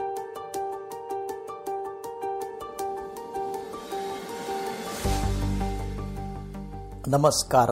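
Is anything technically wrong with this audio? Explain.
No, no technical faults.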